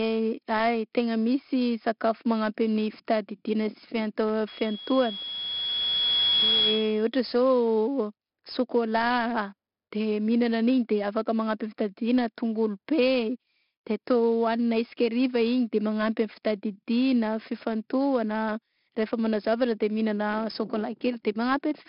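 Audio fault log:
throughout: 4-bit ADPCM compression. Each sample is coded as a coarse 4-bit step from a predicted value, so the rounding error becomes a broadband hiss that rises and falls with the speech, heard as heavy grit on every loud syllable and smeared attacks where the step size lags. Nothing sounds above 5.3 kHz, which fits a low sample rate and a stream of about 44 kbps. On a spectrogram the band stops sharply at 5.3 kHz, with a noise haze filling the gaps between harmonics during speech.
4.48–7.09 s: loudspeaker feedback squeal. The microphone picks up its own loudspeaker output, and at 3.3 kHz the loop gain exceeds one, so that tone keeps feeding itself. It swells over about two seconds into a piercing whistle that ends up a few dB louder than the speech, then stops at 7.09 s when the loop is broken. On a spectrogram it shows as a single bright horizontal line at 3.3 kHz that thickens as it grows. 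On the waveform the envelope swells steadily before cutting off.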